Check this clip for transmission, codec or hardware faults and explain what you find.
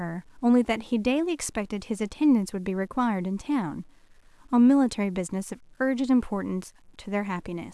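One fault runs through the whole speech clip: low bit depth without dither. The signal was likely truncated to a coarse word length, consistent with about 9 bits, without dither. The error follows the speech, so quiet syllables and decays turn grainy, with gritty distortion roughly 45 dB down that shifts with the sound.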